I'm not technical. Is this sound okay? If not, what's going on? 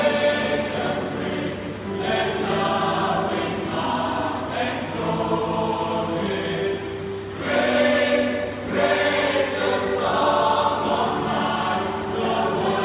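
Yes, nothing here points to a technical problem; the sound holds steady throughout with no dropouts, glitches or interruptions to flag.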